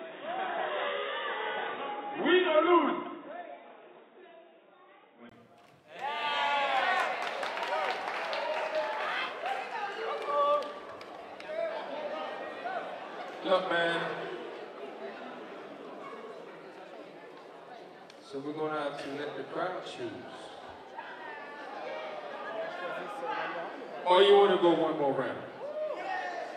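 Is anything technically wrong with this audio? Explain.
Yes. From 0.0 to 5.31 s the sound is dull and boxy, with nothing above 3.8 kHz, and a faint noise floor around 40 dB down. At 5.31 s a 20 ms gap appears and full bandwidth returns at the same level. This is likely an input switched to a poorer device, a narrowband microphone, before recording moved back to the better one. On a spectrogram, energy is sharply capped at 3.8 kHz until a brief blank stripe at 5.31 s.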